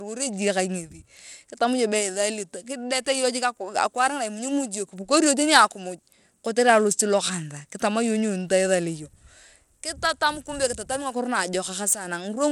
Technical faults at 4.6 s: Bluetooth SBC compression

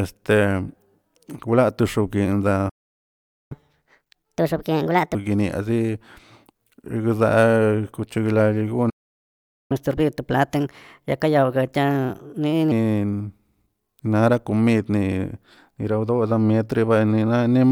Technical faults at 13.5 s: none

